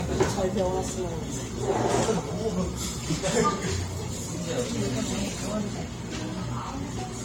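Throughout, the sound is swirly, smeared and hollow, with blurred attacks and nothing above 16.6 kHz. This is likely generation loss. Repeated lossy encoding, perhaps four passes through AAC at modest bitrates, re-quantised on shifting frame grids and piled up noise and spectral holes.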